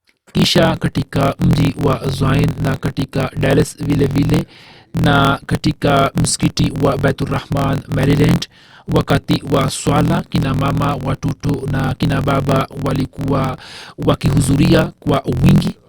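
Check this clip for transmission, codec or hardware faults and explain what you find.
One fault runs through the whole clip: a block size mismatch with truncation. One stage writes longer blocks than the next reads, so each block's tail is dropped. That leaves a 43.1 Hz buzz, fitting a 1024-sample read block. Speech runs 1.12 times fast with its timbre kept.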